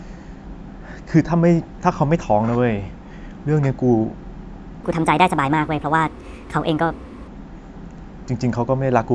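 Wrong sample rate, 4.84 to 7.28 s: speech runs 1.38 times fast and 5.6 semitones high, as if 16 kHz audio played at 22 kHz.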